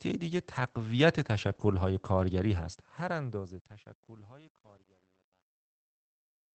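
At 0.55–0.57 s, 1.43–1.53 s and 1.59–1.65 s there is a lost packet rebuilt from error correction. The decoder played low-bitrate copies carried in the following packets, so there are no gaps, but those stretches, 20, 60 and 40 ms long, sound rougher and noisier than the surrounding Opus-coded speech.

Between 1.55 and 1.59 s sits a short concealed packet loss: 20 ms never arrived and was filled by extrapolating the preceding sound, then blended back. It is heard as a brief smear or wobble wedged between the rebuilt stretches.

The fade-out shows truncation distortion from 2.74 s to the end. The gain stage drops too many bits without dither, consistent with about 10-bit resolution. As the level falls, the waveform collapses into coarse steps, and from 3.66 s the tail turns gritty.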